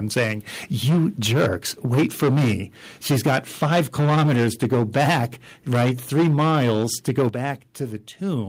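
Microphone overload, likely from an input level set too high, drives peaks about 7 to 11 dB past the converter's limit at 0.16–0.32, 0.85–1.56, 1.91–2.54, 3.1–5.24 and 5.72–7.28 s. The flattened tops give loud syllables a harsh, crackling edge, with a large share of samples cut in the 1.91 s stretch. Each time the call software likely steps the microphone volume down in one jump, the level drops abruptly: about 2 dB at 0.19, 3.27 and 6.28 s, then about 8 dB at 7.29 s.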